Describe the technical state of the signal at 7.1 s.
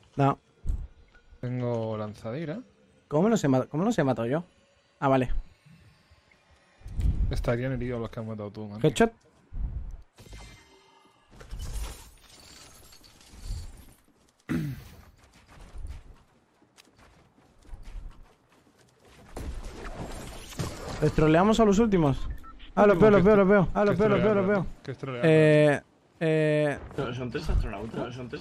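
At 7.1 s the signal is intact, with no audible fault at that moment.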